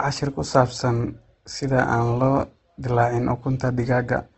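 The speech here has likely been squeezed through a low-bitrate Opus encoder running in its music-oriented CELT mode. Throughout, this is heard as Opus compression that is plainly audible. Nothing reaches above about 8.2 kHz, so the top end sounds cut off, pointing to a wideband setting at roughly 16 kbps. Where bits ran short, bands were filled in rather than left empty, so voiced sounds come across rough, grainy and noisy, not swirly.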